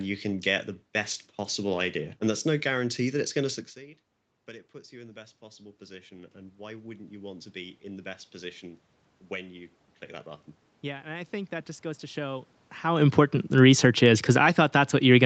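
From 4.46 to 8.89 s, automatic gain rising lifts the level by about 9 dB after the input dropped about 19 dB. It happens again from 10.81 to 13.11 s, by about 4 dB. Voice and room noise swell together, showing as a slowly widening waveform envelope and brightening spectrogram noise floor.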